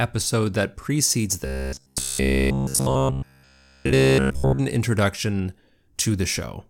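A speech clip with robotic sound from repeated short buffers between 1.46 and 4.60 s, starting right after "that precedes". Through that stretch the voice becomes a rigid, metallic buzz at about 66.8 Hz. It still loosely tracks the speech rhythm. Essentially all of the audio in the section is replaced by repeats. The likely cause is audio arriving too slowly, so a segment of about 15 ms gets looped while the real signal is skipped.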